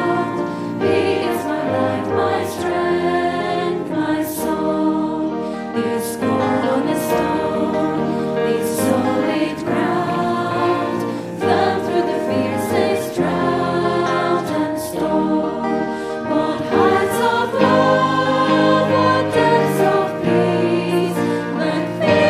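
No technical faults are audible anywhere in this audio.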